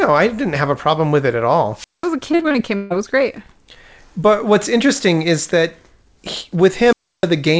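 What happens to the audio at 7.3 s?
A wireless microphone squelch dropout runs from 6.85 to 7.30 s, just after "interesting is that he", and 7.3 s is where the sound comes back. The radio link from the transmitter fades, and as its signal sinks into noise, the receiver's squelch shuts the output off. Hiss rises briefly, then a hole of near silence lasts about 0.31 s before the audio returns, still band-limited to 8 kHz by the call path's wideband codec.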